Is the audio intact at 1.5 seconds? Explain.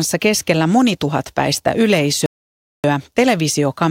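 Yes, at 1.5 seconds the speech plays through cleanly, with no dropout, click, distortion or other fault at that moment.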